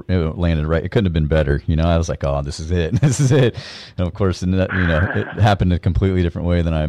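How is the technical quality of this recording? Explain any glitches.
Hard clipping runs through the whole speech clip. The signal is driven roughly 7 dB past what the chain can pass, so peaks get sliced flat, only a small fraction of samples, about one and a half percent. Those flat tops add high harmonics, giving crackly grit on louder syllables.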